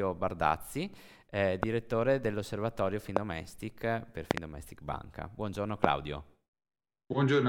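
Loud pops break into the speech four times. The first comes at 1.63 to 1.65 s, the next at 3.17 to 3.19 s. At 4.31 to 4.40 s two pops arrive in quick succession. The last falls at 5.84 to 5.86 s. Each is a sharp, brief thump, around 25 dB above the speech. The speech carries on underneath. The cause is likely a sudden voltage pulse, such as static or a switch glitch, entering the signal path.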